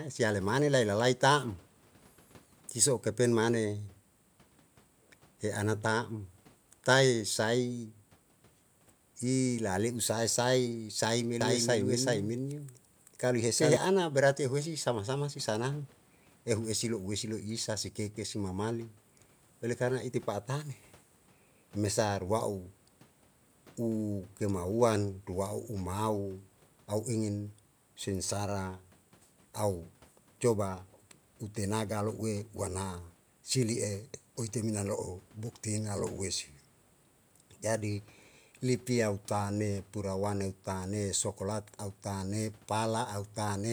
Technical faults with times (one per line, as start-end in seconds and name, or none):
11.41-13.77 doubled audio track